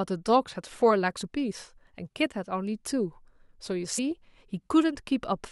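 At 1.21 to 1.28 s and again at 3.97 s, compressed frames are skipped, so the speech jumps ahead by roughly 50 ms and then 70 ms. Each join shows as a brief discontinuity in the waveform and a vertical seam on a spectrogram.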